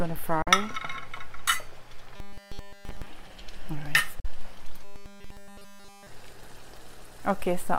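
At 0.42 to 0.49 s the sound cuts to silence, then resumes further on as if it had kept playing. This is a Bluetooth dropout. About 43 ms is missing, which fits two audio packets that likely failed to reach the headphones in time.

From 2.16 to 3.06 s the audio turns into a rigid, metallic 200 Hz buzz that only loosely follows the underlying sound. This robotic sound from repeated short buffers replaces nearly all the real audio with a looping fragment. The 200 Hz pitch points to a 5 ms buffer being repeated, likely because new data arrived too seldom.

At 4.20 to 4.26 s the same silence returns, another Bluetooth dropout of about 43 ms.

From 4.84 to 6.07 s the 200 Hz robotic buzz comes back, likely as the short buffer loops again.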